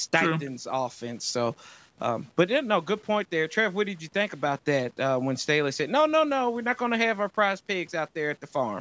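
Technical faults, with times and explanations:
Throughout, low bit depth without dither: the speech carries a grainy, rasping distortion that rises and falls with the voice rather than sitting as a steady hiss, and the quietest syllables and decays turn gritty or sputter toward silence. This is likely from the signal being rounded to very few levels, which fits about 9 bits, with no dither, leaving error tied to the waveform at roughly 35 dB below the signal, all within a band that stops at 8 kHz.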